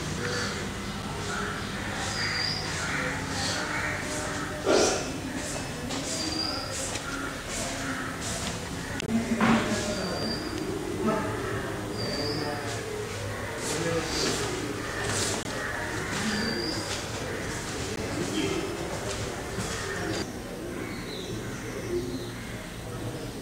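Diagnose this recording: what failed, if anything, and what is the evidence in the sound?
Four hard dropouts cut the sound to dead silence and snap straight back: a short tick at 1.02 s (about 5 ms), fuller pops with an audible hole at 9.06 to 9.08 s and 15.43 to 15.45 s (about 21 ms each), and another tick at 17.96 s (about 13 ms). These are blocks of digital silence at the driver or buffer stage. The output buffer likely wasn't filled in time, so zeros went out instead. The first three gap lengths fit 256-sample and 1024-sample buffers.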